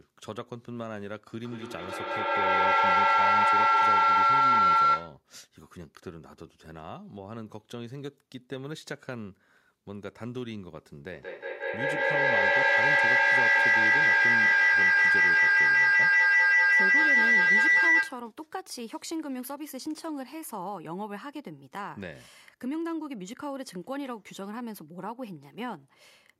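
Feedback howl at 1.43 to 5.22 s and again at 11.12 to 18.3 s: sound leaking from a loudspeaker back into a microphone on the same call gains level on each pass, so the repeats swell and narrow into a tone near 1.5 kHz, then near 2 kHz, with the loop repeating roughly every fifth of a second. Each howl peaks about 13 and 14 dB above the speech and continues until the loop is broken.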